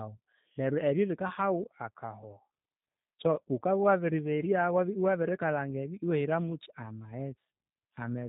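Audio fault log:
throughout: G.729 codec, speech rebuilt from a vocal tract model and sparse pulses, plainly rough and synthetic; the spectrogram is empty above 4 kHz, as at 8 kbit/s.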